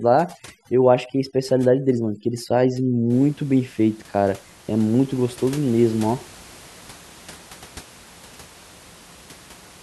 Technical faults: overdone noise removal

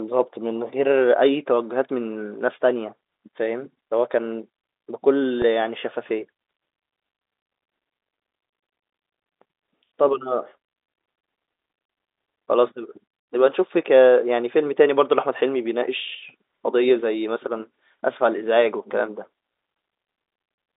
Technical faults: packet loss with pitch repetition

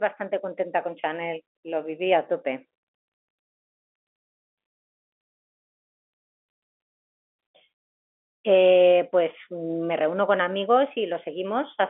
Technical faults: none

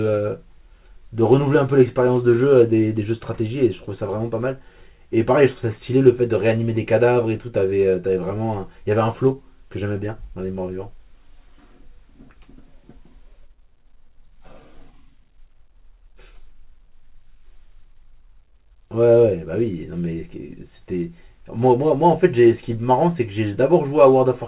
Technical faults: none

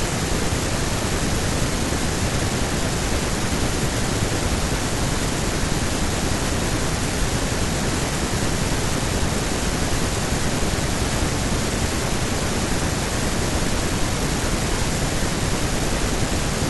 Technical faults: none

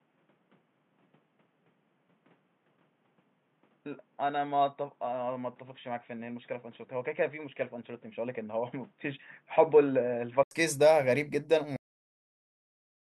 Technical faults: input switched to a poorer device; cut-off end

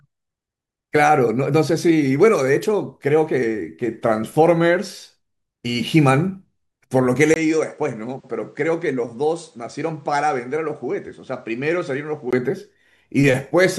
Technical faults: input switched to a poorer device

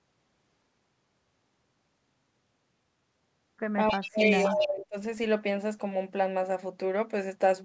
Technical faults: echo leak; speech suppressed in double talk

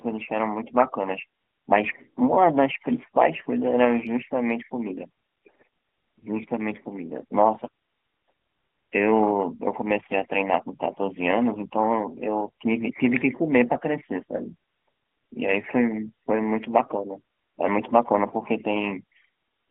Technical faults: AMR bit errors

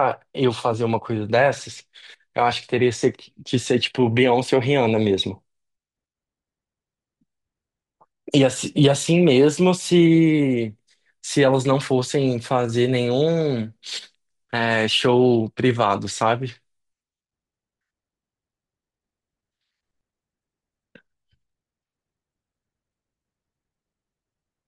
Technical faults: imaging from linear upsampling

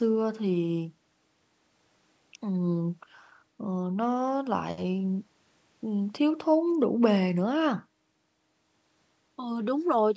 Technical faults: none

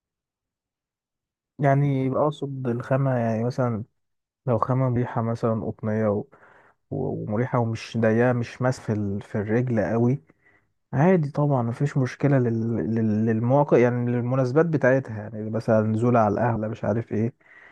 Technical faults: compressed frames skipped

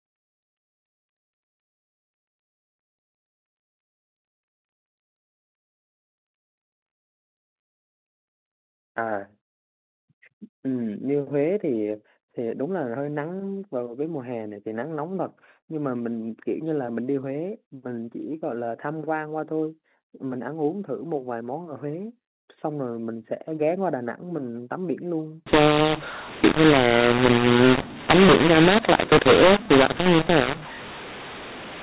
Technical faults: mu-law and A-law mixed up

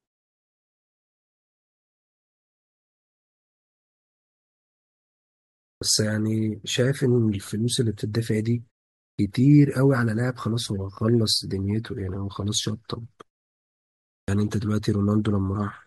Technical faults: clipped start after a pause

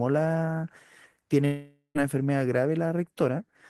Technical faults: long network dropout

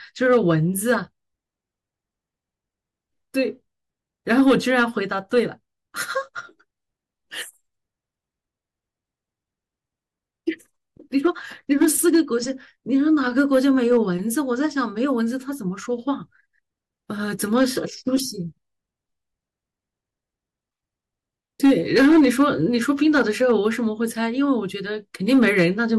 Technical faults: hard clipping

